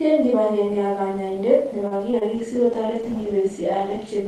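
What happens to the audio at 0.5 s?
Nothing goes wrong at 0.5 s; the speech runs on intact there, carrying only the ordinary coding of the call path with its top end limited to about 12 kHz.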